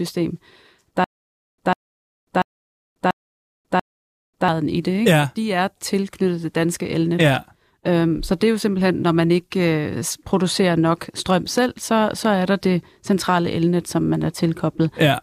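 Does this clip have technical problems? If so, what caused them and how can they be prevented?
Yes. A stutter with silent gaps runs from 1.04 to 4.48 s, just before "i det": the same 147 ms burst repeats five times every 688 ms, separated by 541 ms of digital silence. On a waveform or spectrogram it appears as identical blocks with flat, empty gaps between them. This is likely a stalled player or stream replaying its last fragment on each retry. Larger buffering, and recovery that resumes playback instead of replaying, would prevent it.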